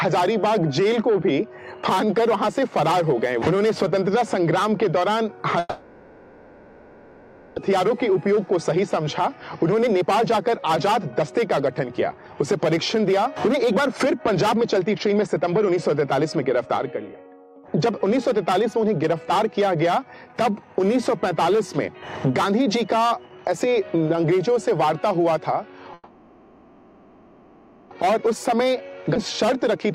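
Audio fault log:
5.59–7.59 s, call audio freeze: the sound stalls for about 2 s. The last bit of audio gets stretched into a fading buzz that ends in a very short silence, about 10 ms, and then things carry on exactly where they left off. Nothing is lost, but everything after it now runs nearly 2 s late. The likely cause is packets held up in transit, which let the jitter buffer run dry.
7.72–20.35 s, jitter buffer speed-up: after that stall the receiver has a backlog of roughly 2 s to work off. It trims tiny pitch-period-sized slices again and again, so the audio plays at about 116% speed with the pitch unchanged. Over those 12-odd seconds it sounds noticeably rushed until the extra delay is gone.
25.94–27.94 s, call audio freeze: same story again. The audio hangs for about 2 s as a decaying buzz and then a brief gap of about 20 ms before it picks up right where it stopped. Nothing is skipped, and the delay jumps by nearly 2 s. 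Once more a likely holdup of packets drained the buffer.
28.04–28.99 s and 29.50–29.90 s, jitter buffer speed-up: two short catch-up runs, first at about 108% and then about 115%. Each shaves off something like 70 ms by dropping tiny cycle-length pieces, so the sound hurries briefly at the same pitch. Both are short enough to come across as a brief rush and not a sustained one.
29.15 s, skip ahead: playback jumps forward with almost no gap, about 10 ms of fill. Roughly 0.7 s of audio just vanishes, and the material on either side of the jump is butted straight together. It points to a chunk being discarded while later audio was already queued, which is a quick way to claw back the delay.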